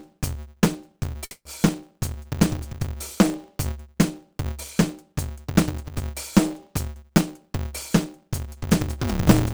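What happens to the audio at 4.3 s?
At 4.3 s the music is in the middle of a block size mismatch (truncated) that runs through the whole clip. Each written block, consistent with 512 samples, loses its tail, producing a 150 Hz buzz and 1.6× faster playback at roughly normal pitch. A sample-rate mismatch would shift the pitch too.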